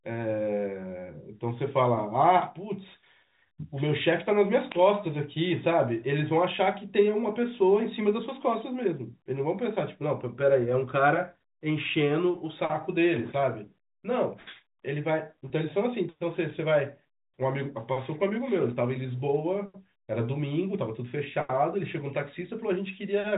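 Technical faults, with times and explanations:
15.48 to 15.50 s, packet loss with pitch repetition: a gap of about 20 ms, which fits a single lost packet, is bridged by repeating the last pitch period. The sound briefly holds one steady, slightly buzzy tone instead of dropping out. Because the gap is so short, the repetition never fades to silence before the audio resumes. Unlike a plain dropout or a click, there is no hole or sharp edge, just a brief frozen buzz within the telephone-band G.711 sound.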